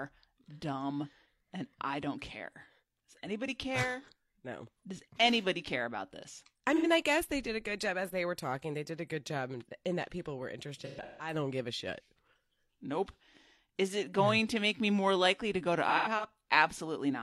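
AAC frame loss with concealment: at 6.76 s, after "care about this I", about 85 ms smears as the decoder rebuilds from the last good spectrum. Scattered losses from 10.81 to 11.33 s, after "in that people were", and from 15.88 to 16.25 s, after "likely to go to", leave phasey, noisy patches.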